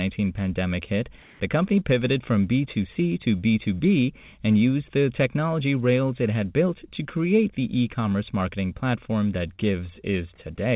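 A speech recording carried over a WebRTC call path, so the sound has no content above about 4 kHz, which fits a G.711 mu-law narrowband link. Between 1.22 and 1.4 s, right after "pandemic hit" and before "the company pivoted from", the real background drops out for about 180 ms and is replaced by a flat, textureless hiss at almost the same level, about 1 dB different. This is comfort noise in place of the background. The likely cause is discontinuous transmission: the sender's voice detector treated that short gap as silence and stopped sending audio, and the receiver filled it with synthetic noise shaped to the background's rough spectrum. From 9.56 to 9.6 s, just after "commerce marketing platform that", there is a brief smear where the audio holds on and then blends back in. This is short concealed packet loss. About 20 ms of audio never reached the decoder in time, and the receiver bridged the hole by extending the preceding sound for a fraction of that span before returning to the real signal.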